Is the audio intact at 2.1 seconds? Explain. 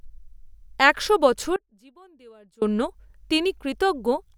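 No, not at 2.1 seconds. That moment falls inside an audio dropout to a faint residue running from about 1.56 to 2.62 s, roughly a second of lost speech. The speech cuts off abruptly rather than pausing or fading. What's left in the gap is only a faint sound, something like 25 dB down, then the speech snaps back. That pattern points to the signal likely being interrupted upstream while the path after the break stayed live.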